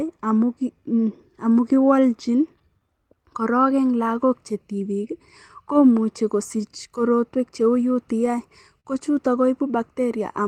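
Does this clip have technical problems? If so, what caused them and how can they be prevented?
Yes. Clock drift between sender and receiver runs throughout: the sender's clock runs about 3% slow, so the receiver's jitter buffer keeps draining. Prevent it by locking both ends to a common clock or resampling adaptively to the measured rate.

Repeated timing corrections run from 0.03 to 10.15 s. The receiver stretches the audio to about 99% speed, adding roughly 150 ms in small repeated pieces. Prevent it with smooth, continuous drift compensation instead of discrete piece insertion.

Scattered short gaps fall between 0.08 and 1.40 s and between 7.95 and 8.88 s, about three in each stretch. Lost or late packets were patched by continuing the last sound, with the longest gap around 40 ms in the second stretch. Prevent them with a deeper jitter buffer and a more stable network path.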